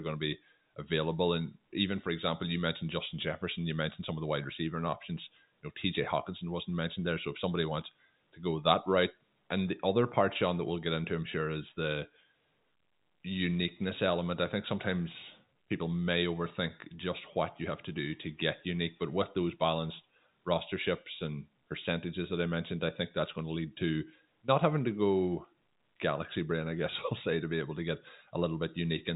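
Speech carried over an ordinary G.711 telephone line, with nothing above about 3.8 kHz, and nothing technically wrong with it.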